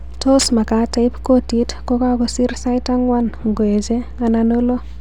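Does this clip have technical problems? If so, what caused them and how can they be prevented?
Yes. Mains hum runs through the whole speech clip as a steady 60 Hz tone with low harmonics, sitting roughly 15 dB below the speech. Power-line current is leaking into the signal path, most plausibly through a ground loop between connected devices or magnetic coupling from a nearby transformer or power supply. To prevent it, use balanced cabling and a single common ground point, and keep recording gear away from transformers.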